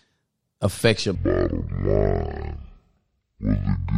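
From 1.15 s to the end, the speech slows to half speed and falls exactly an octave: stereo read as mono, with interleaved left and right samples played in sequence as one channel. Unlike a sample-rate mismatch, a faint mirrored copy sits high in the spectrum.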